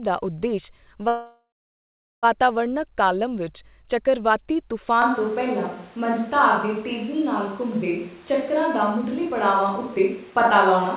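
From 1.08 to 2.26 s the sound trails off into a fading buzz, goes silent for about 0.8 s, then resumes where it stopped. This call audio freeze likely came from delayed packets draining the jitter buffer, inserting a gap of about 1.1 s.

At 5.02 s, right after "ਕਾਲਮ ਵਿੱਚ ਚੱਕਰਵਾਤੀ", the speech suddenly turns roomy, hollow and thin at a similar level, with room noise about 30 dB below it until the end. This is a switch to a distant microphone, likely because the close microphone's signal dropped out.

From 8.23 to 10.85 s the speech sounds hurried, about 7% fast at unchanged pitch. This jitter buffer speed-up comes from the receiver cutting short pitch-period slices, roughly 0.2 s in total, to shrink its backlog. Throughout, the audio stops at 4 kHz, which fits a G.711 call codec.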